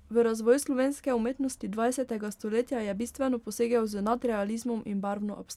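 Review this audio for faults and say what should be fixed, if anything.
Nothing stood out on listening to this speech recording, so there is nothing to fix.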